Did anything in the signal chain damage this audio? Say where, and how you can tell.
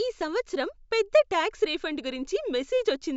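No, nothing audible in this speech recording points to damage at any stage of the signal chain, from capture through to playback.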